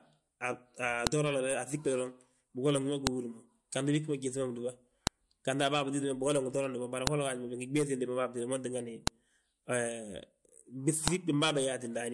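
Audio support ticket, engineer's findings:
Sharp click at 1.07, 3.07, 5.07, 7.07, 9.07 and 11.08 s, repeating every 2 s on the speech. File header played as audio: concatenation or streaming step not stripping WAV headers, so header bytes are decoded as samples at each 2 s piece boundary.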